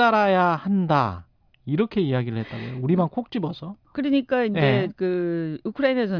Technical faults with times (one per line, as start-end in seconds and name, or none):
none